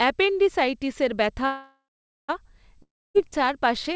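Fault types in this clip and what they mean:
Call audio freeze: From 1.46 to 2.30 s the sound stops advancing. The last fragment trails off as a fading buzz or hiss into about 0.49 s of silence, then resumes where it left off, adding 0.83 s of delay. The likely cause is delayed packets draining the jitter buffer.
Long network dropout: From 2.83 to 3.16 s the sound again decays into silence, about 0.27 s of it. When it resumes, roughly 0.32 s of audio has been skipped rather than delayed, which points to packets that likely never arrived.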